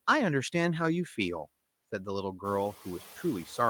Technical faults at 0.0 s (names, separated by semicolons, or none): noise suppressor artifacts